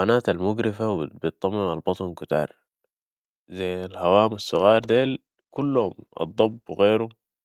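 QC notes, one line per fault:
4.35–6.77 s, call bitrate drop: just after "ذي الهوام" the speech turns rough and watery and stays degraded for about 2.4 s before recovering. The sound fits the encoder being pushed from around 64 kbps down to about 18 kbps after the call's bandwidth estimate fell, leaving it too few bits to code detail finely. On a spectrogram the upper band thins out and then cuts off sharply, with smeared, blocky texture below; the waveform envelope stays largely unchanged.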